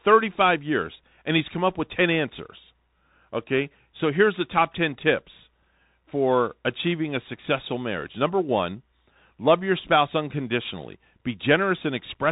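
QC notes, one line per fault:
throughout, Bluetooth CVSD headset codec: the speech has been squeezed through the narrowband headset link, where each sample is reduced to a single up-or-down bit and the step size has to chase the signal, which fits a 64 kbps CVSD stream. Nothing survives above 3.8 kHz, so the sound is dull and boxy. Fast, loud high content outruns the step and distorts, sibilants come out scratchy, and a granular hiss sits beneath the speech.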